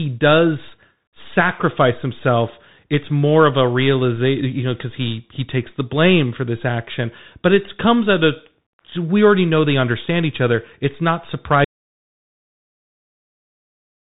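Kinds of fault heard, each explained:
Bluetooth CVSD headset codec: The whole clip of speech passes through a one-bit delta coder whose step size adapts. Content stops near 3.8 kHz, so the spectrogram is flat black above that line. Sibilants sound scratchy, loud bright syllables smear, and a grainy hiss sits beneath the speech.
Audio dropout to silence: At 11.65 s the sound cuts off abruptly and stays gone to the end, about 2.5 s later. The waveform drops to a dead flat line with no room tone, and the spectrogram goes fully blank. The likely cause is a lost input or link.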